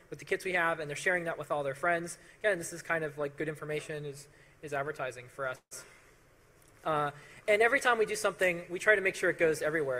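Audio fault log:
5.55–5.73 s call audio freeze: packets were likely held up and the jitter buffer emptied, so the last sound was stretched into a fading buzz or hiss, about 70 ms of silence, and a 157 ms gap.
7.23–9.13 s GSM signalling bursts: a nearby 2G phone sending short radio bursts was rectified by the audio circuit, giving a faint galloping dit-dit-dit of brief 217 Hz buzzes, roughly 30 dB down.
9.13 s to the end, GSM phone buzz: a nearby 2G phone in a call transmitted 217 bursts per second, which the circuit rectified into a steady, raspy 217 Hz buzz rich in harmonics, about 32 dB below the signal.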